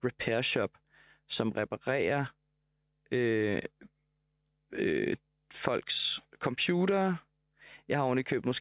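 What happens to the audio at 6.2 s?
Nothing goes wrong at 6.2 s: the speech continues intact through that moment, with no dropout, click or distortion to be heard.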